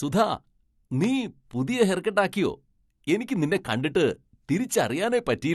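A loud pop hits this speech clip at 1.04 to 1.06 s, just before "പുതിയ ഹെയർകട്ട് ആക്കിയോ": a single sharp click rising roughly 10 dB above the speech, while the talking carries on beneath it. A pop like this is most likely a sudden voltage step, from a plug, switch, static discharge or driver glitch, added to the signal, briefly shaped by the downstream circuitry into an audible transient.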